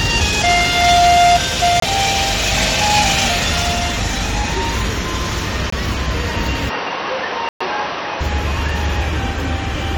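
At 1.80 s and again at 5.70 s the sound drops into abrupt silence for about 36 ms and 42 ms, each the length of a single frame. This is a corrupt frame muted: a damaged compressed frame was rejected and replaced with silence. Unlike a buffer dropout, nothing afterwards is delayed or shifted.

From 6.70 s to 8.21 s the audio turns dull and boxy, with nothing above 6 kHz and a faint new noise floor about 40 dB below the signal. It arrives with no gap and no change in level, and the full band returns at 8.21 s. The likely cause is an input switched to a poorer device. The added background noise and the clean return set it apart from a codec's fixed low-pass.

Within that stretch, at 7.49 s, a longer corrupt frame muted hole runs to 7.62 s. At about 130 ms, it fits five consecutive rejected frames.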